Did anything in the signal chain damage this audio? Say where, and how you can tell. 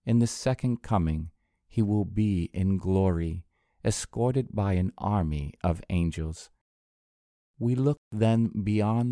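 No, nothing in the signal chain damaged this audio.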